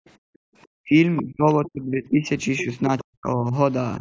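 Speech recording with a call's microphone path, band-limited to 8 kHz, showing background gated by the echo canceller from 0.0 to 0.52 s: the room sound drops by up to about 40 dB while the canceller clamps the microphone during loudspeaker playback, then comes back. The talker's speech dips in four places, at 0.8–0.95 s (about 40 dB), 1.22–2.25 s (about 25 dB, roughly a second), 2.64–2.68 s (a shallow dip of about 5 dB) and 2.86–3.54 s (about 40 dB, around half a second in all), likely speech suppressed in double talk, with the canceller attenuating the near voice because it cannot tell it apart from the far-end echo. Short scraps of a second voice appear at 1.16–1.22 s, 2.58–2.64 s and 2.98–3.04 s, about 15, 10 and 20 dB below the speech, likely the other side's voice leaking through because the canceller left some residual loudspeaker echo in the microphone.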